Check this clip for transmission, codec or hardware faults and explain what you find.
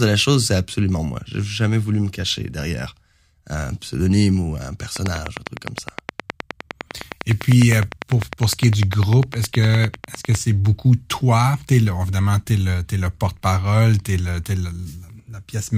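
One hardware-type fault: a train of clicks from 4.96 to 10.36 s, between "un pseudonyme ou un" and "c'est beaucoup toi es". About fifty identical pulses, evenly spaced at 9.8 per second and far louder than the speech, most likely from electrical interference or a struggling interface. Their fixed rate and shape set them apart from random crackle.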